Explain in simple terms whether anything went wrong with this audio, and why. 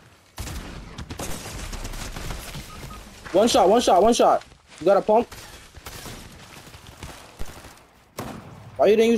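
Low thumps at 1.29, 4.05 and 7.42 s are a DC step: the waveform's resting level jumps and slowly settles back. Unlike a dropout, the sound never breaks.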